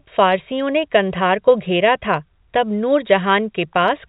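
No technical faults can be heard in the speech. It carries the narrow band of G.711 telephone coding, with nothing above 4 kHz and only a faint quantisation noise that rises and falls with the level.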